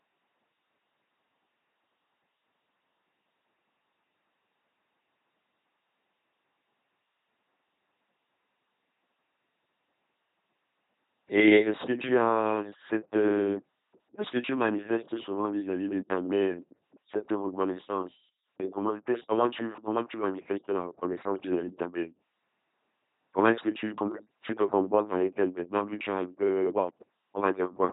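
From start to finish the speech has a buzzing, mechanical robot quality, with harsh buzz or hiss wherever the voicing call goes wrong, and nothing is heard above 3.8 kHz. This is an LPC-10 vocoder, heavily damaging, which fits a 2.4 kbit/s coder. It rebuilds the speech through a simple vocal tract filter fed by either a pulse train or noise, treating each moment as fully voiced or fully unvoiced, so natural texture is lost.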